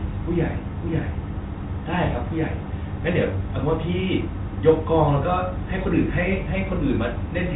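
Nothing here counts as a fault: the speech comes over a narrowband telephone-style path whose top end stops at about 3.8 kHz, and the only trace of the coding is a faint roughness, which fits G.726 ADPCM running at its highest 40 kbit/s setting.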